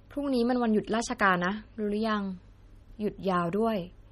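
Speech runs throughout with plainly audible MP3 compression artefacts, likely from low-bitrate encoding near 32 kbps: nothing remains above 15.2 kHz, and weak components flicker between frames into a watery swirl, which a plain low-pass filter would never add.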